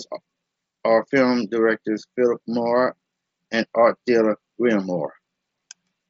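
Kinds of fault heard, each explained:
No faults can be heard anywhere in this speech.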